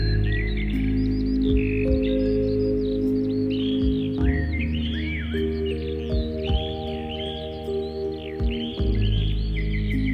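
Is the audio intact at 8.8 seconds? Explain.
Yes, the audio is intact at 8.8 seconds, with no audible fault at that moment.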